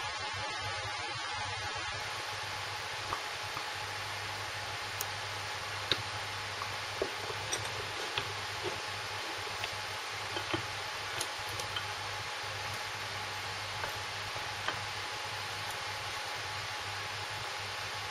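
An adaptive stream starting at a low bitrate: from 0.0 to 2.0 s the player uses a lean version, which fits about 24 kbit/s AAC, so nothing sounds above 12.3 kHz, then abruptly clears without a gap.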